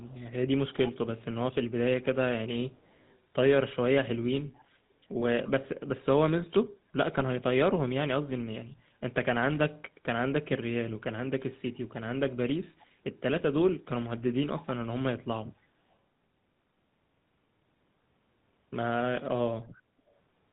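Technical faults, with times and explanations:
throughout: GSM full-rate codec. The speech has a plainly audible buzzy, gravelly roughness and nothing above 4 kHz, consistent with 13 kbps GSM full rate, which models the vocal tract and excites it with a sparse, regularly spaced pulse train.
0.0–0.2 s, 0.87–0.92 s, 2.74–3.19 s, 5.45–5.51 s, 12.79–12.87 s, 15.91–15.95 s: echo leak. Short copies of the speech return 291 ms late, from very faint to moderately faint. This is likely residual loudspeaker pickup that the far end's echo canceller failed to remove and sent back.
7.16–7.22 s: GSM bit errors. The speech briefly breaks into a squawk and gargle. Corrupted filter, pitch or gain parameters reached the decoder, bending the spectrum and level for a few consecutive frames. The burst fits around three damaged frames on a weak radio link.
19.88–19.99 s: background gated by the echo canceller. 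The room sound dips by about 6 dB for roughly 70 ms, then recovers. The echo canceller clamped the microphone down while the loudspeaker was active and released it when playback stopped.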